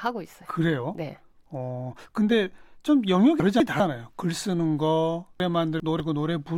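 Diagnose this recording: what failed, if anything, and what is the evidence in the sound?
Chunks out of order at 3.4 to 3.8 s and 5.4 to 6.0 s, a buffering or packet-delivery fault in which 200 ms blocks of speech reach the output in the wrong sequence. In the first event one block plays one slot late; in the second a block plays two slots late. Nothing is missing, but each event leaves a short jumbled stretch bounded by abrupt joins where unrelated waveform edges meet.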